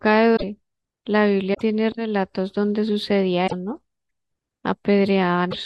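At 0.35 to 0.44 s, 1.53 to 1.61 s, 3.46 to 3.53 s and 5.50 to 5.54 s the speech skips ahead and each gap fills with a brief chirp, noise burst or short hole, likely a broken MP3 bit reservoir. Unlike a clean dropout, the garbling spans a few 26.1 ms frames after each cut, as the decoder borrows data from the wrong frame.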